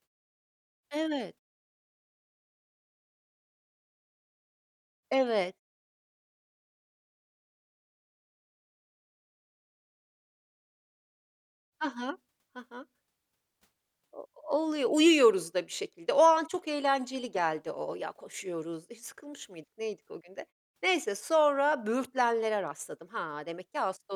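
No technical faults can be heard anywhere in the speech. In the pauses the background fades away to silence and comes back in time for the next sound, and only very quiet sound is lost.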